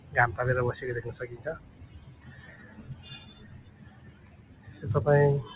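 A noise suppressor built for speech has been left running on non-speech audio. It treats sustained tones, ambience and reverberant tails as noise and pulls them down, so level rises and falls by around 15 dB as the processor opens and closes. The result is a pumping, fluttery, thinned-out sound. On a waveform, attacks stand at full height while the envelope collapses behind them. On a spectrogram, held partials and decays look patchy and eroded. Between 3.64 and 4.67 s, the suppressor cuts one sound harder than its surroundings, by about 5 dB at the deepest point, over roughly a second. A spectrogram shows that stretch fading early instead of decaying naturally, and the waveform envelope dips there. Throughout, the call path's band limit shows as an empty spectrogram above 4 kHz, which fits G.711 mu-law at 64 kbps.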